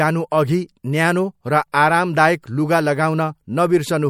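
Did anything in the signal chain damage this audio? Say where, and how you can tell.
Yes, at the codec stage: the speech sounds watery and swirly throughout, with nothing above 19.5 kHz, likely from MP3 compression at around 64 kbps, where weak frequency lines flicker between frames.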